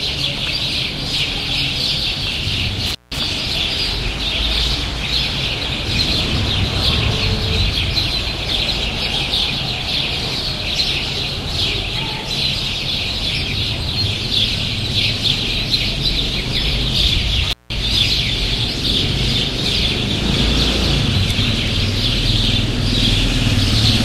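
The sound drops out abruptly at 2.86 s and again at 17.50 s, each gap lasting about 0.17 s with crackle at its edges and faint hiss inside. This is intermittent contact: a loose cable or plug briefly opening the signal line.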